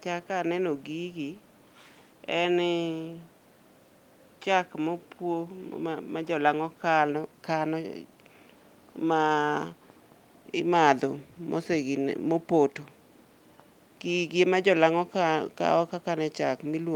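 No technical faults can be heard anywhere in the speech recording, and the signal stays continuous and steady throughout.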